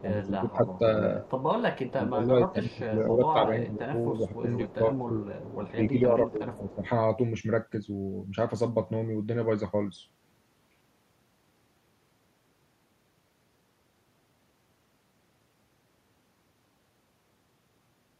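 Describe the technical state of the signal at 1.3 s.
An echo leak runs from 1.27 to 1.41 s: a faint copy of the speech arrives about 0.25 s late, likely residue a far-end echo canceller failed to remove.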